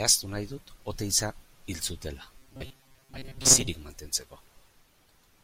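Speech clip. From 2.38 to 3.68 s, audio likely arrived too seldom, so a buffer of about 7.5 ms was replayed for most of that span, producing robotic sound from repeated short buffers: a rigid, metallic 134 Hz buzz.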